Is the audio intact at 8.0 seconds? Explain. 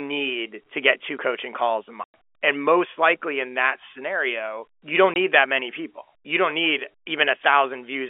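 Yes, the speech at 8.0 seconds is intact, with nothing breaking up or dropping out, only the narrow telephone band of its G.711 coding.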